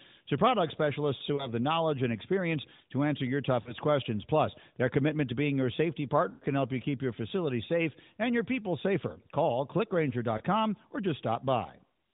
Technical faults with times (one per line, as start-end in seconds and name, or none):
1.36-1.48 lost AMR speech frames
3.62-3.74 lost AMR speech frames
6.30-6.46 lost AMR speech frames
10.38-10.42 lost AMR speech frames